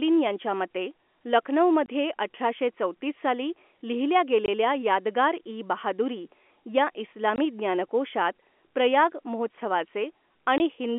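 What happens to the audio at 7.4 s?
At 7.36 to 7.38 s the speech drops out for 20 ms, just before "ज्ञानकोशात प्रयाग". This is packet loss filled with silence. One lost packet, which fits a 20 ms packet size, was replaced by a hard gap. Its edges are abrupt.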